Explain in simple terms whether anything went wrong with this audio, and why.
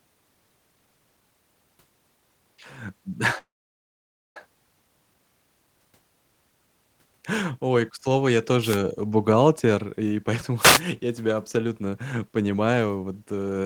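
From 3.38 to 4.37 s there is a call audio freeze: the speech halts for about a second, mostly silent, then resumes where it stopped with nothing lost, likely from delayed network packets.

Two wireless microphone noise hits add short bursts of static, from 8.61 to 8.79 s after "к слову я" and from 10.59 to 10.82 s after "э бухгалтер и поэтому". The radio signal briefly faded, letting receiver noise through.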